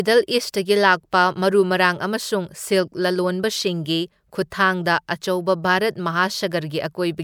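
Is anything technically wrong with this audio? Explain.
No, nothing technically wrong can be heard in this speech recording. There are no faults to point to anywhere in it.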